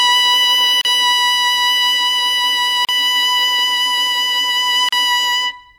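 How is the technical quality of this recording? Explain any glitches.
The music is interrupted by a recurring gap at a join of encoded pieces, at 0.81–0.85 s, 2.85–2.89 s and 4.89–4.93 s. The audio was encoded as separate two-second pieces and joined untrimmed, so encoder start delay and final-frame padding leave a gap of about 37 ms, its edges smeared so the silent part is shorter, before the music resumes where it stopped.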